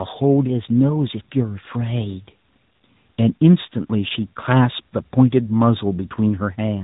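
Tandem speech coding runs from start to finish. The speech has passed through two speech codecs in a row, each decoding and re-encoding the previous one's already damaged output, so their errors stack. The result is rougher, more muffled and more warbly than a single codec would sound. Nothing survives above about 3.8 kHz, and the character fits an ADPCM stage such as G.726 followed by a narrowband AMR coder near 10.2 kbit/s.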